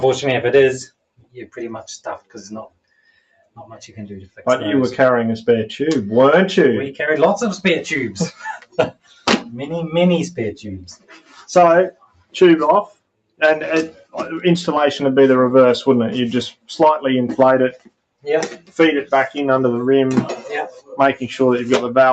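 A noise suppressor built for speech stays active through the whole clip, treating steady parts of the sound as noise. The level keeps shifting by roughly 10 dB, so sustained material pumps and thins while sharp onsets pass through more intact.

The suppressor cuts the sound hardest at 0.89–1.57 s, 2.19–3.58 s, 8.59–9.27 s, 10.96–14.14 s, 16.52–16.69 s, 17.73–18.77 s and 20.71–20.94 s. Held and decaying sound sinks by up to about 21 dB (about 17 dB in the last dip), and tails are clipped short.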